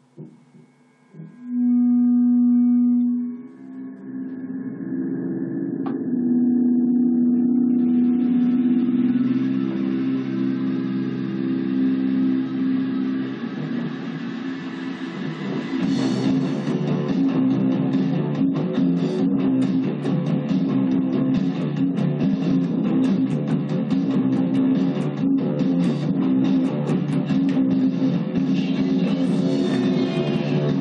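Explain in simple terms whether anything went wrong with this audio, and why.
Nothing went wrong: no dropouts, glitches or other faults turn up anywhere in the audio.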